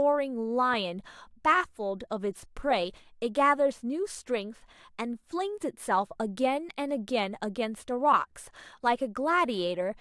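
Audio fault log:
No fault is heard in this speech clip.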